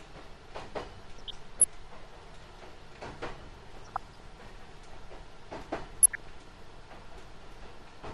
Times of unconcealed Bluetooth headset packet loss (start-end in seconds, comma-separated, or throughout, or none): none